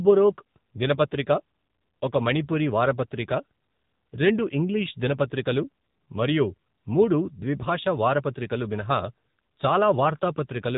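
Speech run through the AMR narrowband mobile codec for its whole length. Everything above about 3.8 kHz is gone, so consonants lose their edge and the voice sounds boxed-in, like an old phone call. The codec damage is plainly audible: AMR-NB rebuilds the voice from a vocal-tract model fed by a few pulses per 5 ms, and here it comes out buzzy and synthetic, which fits its 7.95 kbps mode.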